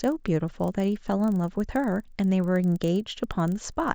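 Resampler restarted on every block, from start to finish: the 16 kHz speech was converted up to 48 kHz in separate 40 ms chunks, each handled as if nothing came before or after it. At every chunk boundary the interpolation filter lacked the true neighbouring samples, leaving a small discontinuity. These repeat 25 times a second, giving a rapid ticking that blurs into a rough, low buzz riding on the speech and falling away in the gaps between words.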